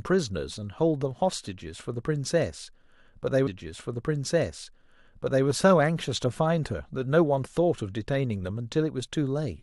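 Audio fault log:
3.46–5.46 s, stream segment repeated: about 2.0 s of the speech plays a second time, with a small blip at the jump back where playback returns to the earlier point. The player queued or fetched the same segment twice, so this stretch is heard again.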